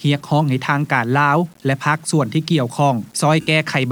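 The whole clip carries grainy distortion that tracks the sound. Quiet passages turn gritty, with error roughly 35 dB below the signal. The likely cause is low bit depth without dither. Samples rounded to a coarse grid leave error that follows the signal, consistent with about 8 bits.

From 3.41 to 3.47 s, about 60 ms, the sound dissolves into a noisy smear. These are lost LE Audio frames. The decoder covered the gap by repeating the last spectrum with random signs, which fits a run of several lost frames.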